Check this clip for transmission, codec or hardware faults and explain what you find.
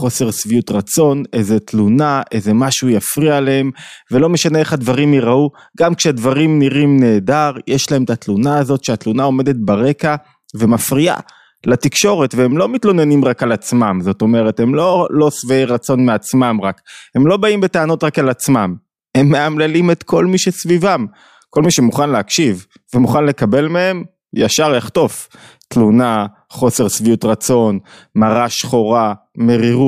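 No faults turned up anywhere in the recording.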